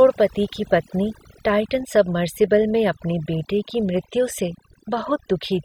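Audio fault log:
Throughout: overdone noise removal, aggressive suppression gating bands near the noise floor, leaving near-silent gaps with twinkling specks rather than steady hiss.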